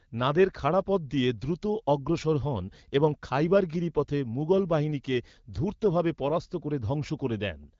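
No technical faults are audible.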